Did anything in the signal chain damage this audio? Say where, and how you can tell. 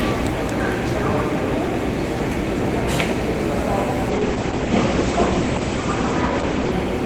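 Yes, a call bitrate drop at the codec stage, from 4.1 s to 6.79 s. The audio turns coarse and watery, and the top end collapses from about 20 kHz down to an 8 kHz cut-off, holding at its worst for about 2.6 s before recovering. The encoder was starved of bits, which fits a fall from roughly 32 to 11 kbps. Unlike packet loss, there are no gaps or clicks, and unlike a fixed filter the dulling comes and goes.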